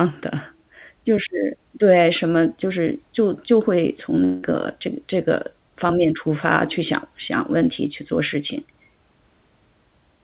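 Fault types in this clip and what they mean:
long network dropout: From 4.24 to 4.53 s the speech stops arriving and the receiver conceals the gap, stretching the last sound into a fading buzz for 185 ms rather than going silent. About 180 ms of the original speech is missing, and when audio resumes a further 12 ms has been skipped. This is likely a network outage masked by the jitter buffer, heard through the narrowband G.711 path with nothing above 4 kHz.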